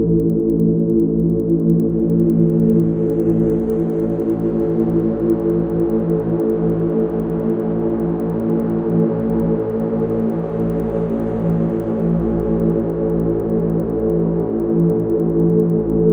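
Throughout, regular ticks recur at 10 Hz, only under signal. The resampler was restarted on every block, likely 100 ms blocks converted from 24 kHz to 48 kHz, leaving errors at each edge.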